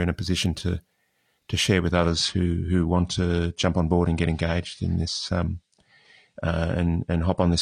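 At 1.90 s the speech suddenly gets duller and stays that way to the end, with no gap or dropout at the switch. That's an adaptive stream at a lower bitrate: the player stepped down to a leaner encode, probably because the connection slowed. Nothing comes through above about 9.9 kHz, and there's more codec smear and swirl. The sound points to something like an AAC stream dropping from around 96 to around 32 kbit/s.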